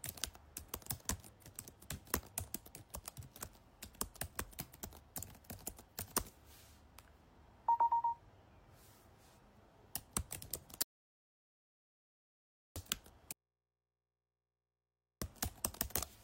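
A recording of everyday sounds has two separate breaks near its end. From 10.82 to 12.76 s there is a rebuffering stall: the audio stops dead into silence for about 1.93 s and then picks up exactly where it left off, so nothing is lost but time is added. This fits a player that ran out of downloaded data and waited for more. A waveform shows a flat line inserted between two continuous halves, and a spectrogram shows a blank vertical band. Shortly after, from 13.33 to 15.22 s, comes an audio dropout to a faint residue. The sound cuts out abruptly for about 1.89 s, leaving only mains hum roughly 55 dB below the normal level, and then returns mid-flow. This is likely the wanted signal being lost while the input after the break stayed live. On a waveform the gap is a thin but not quite flat trace. On a spectrogram it shows as a dark band crossed by faint horizontal lines at the hum frequency and its harmonics.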